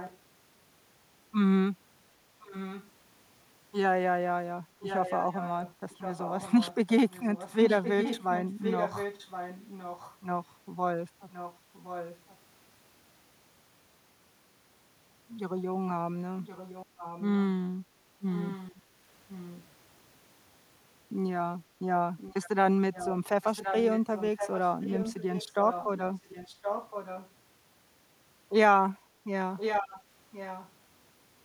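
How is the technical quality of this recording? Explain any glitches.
The recording has a recurring echo leak: a delayed copy of the speech, about 1.07 s late, at 0–0.18, 2.4–2.9, 4.81–10.15, 11.3–12.37, 16.45–17.43, 18.33–19.64, 22.18–27.3 and 29.57–30.71 s. It is likely a loudspeaker-side echo canceller passing residual pickup back. It sits about 15 dB down, rising to about 10 dB in the long stretches and about 5 dB near the end.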